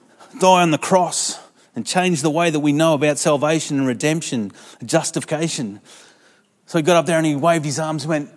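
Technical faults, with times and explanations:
Nothing stood out as a technical problem on listening through this speech recording.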